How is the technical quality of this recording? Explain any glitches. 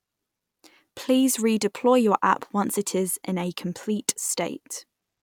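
No audible glitches or faults.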